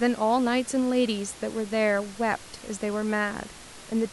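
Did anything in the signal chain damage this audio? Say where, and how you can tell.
No, no signal-chain damage.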